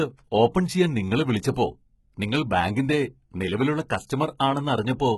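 HE-AAC compression runs throughout the speech and is the likely cause of the heavy damage. The treble sounds copied up from lower bands rather than captured, so s sounds turn gritty and metallic. Nothing reaches above 11.8 kHz, which fits a bitrate near 16 kbps.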